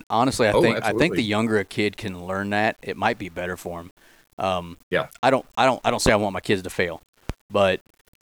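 From start to end, the speech carries a grainy distortion that rises and falls with the signal, heard most in quiet passages and decaying syllable tails, which roughen and sputter between adjacent steps. This is low bit depth without dither, likely a reduction to about 9 bits with plain rounding, so the quantisation error tracks the waveform instead of forming a steady hiss. The error sits roughly 35 dB below the signal.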